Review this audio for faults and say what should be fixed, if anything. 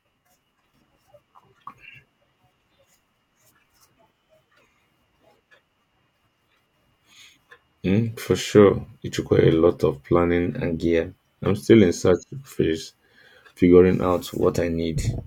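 The speech briefly speeds up about 6% and rises roughly a semitone (106 cents) at 3.97–4.61 s, 10.47–11.46 s (after "requires a lot of", before "still in search phase") and 14.03 s to the end (after "in search phase figuring"), likely a drift correction step in clock-matching software. To prevent it, use a shared clock or resample gradually instead of in abrupt steps.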